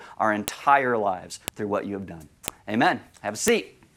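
At 0.48, 1.48, 2.48 and 3.48 s, a sharp click marks the file header played as audio: each 1.0 s piece kept its header bytes, which sound as a loud snap. A waveform shows a narrow spike; a spectrogram shows a thin full-band vertical line.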